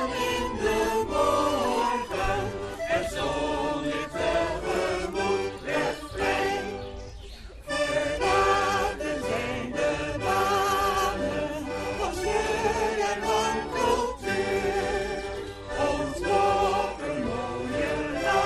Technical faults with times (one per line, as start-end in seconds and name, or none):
0.00-18.46 MP2 compression
2.54-2.59 DAB burbling
6.33-6.65 DAB burbling
10.36-10.55 DAB burbling